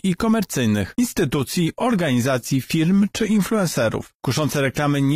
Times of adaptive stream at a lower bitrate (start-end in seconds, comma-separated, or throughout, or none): 0.99-5.15